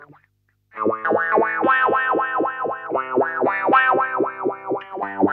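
Nothing stood out on listening; no technical fault could be heard anywhere in the audio.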